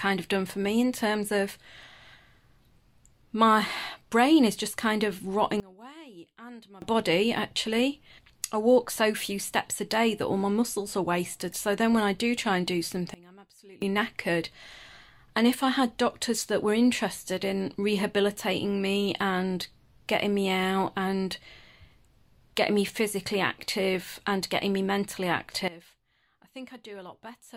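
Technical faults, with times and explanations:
5.6–6.82 s, 13.14–13.82 s, 25.68 s–end: sudden gain jump. Sound and background noise drop together by about 24, 23 and 18 dB, likely from digital gain switched without a ramp.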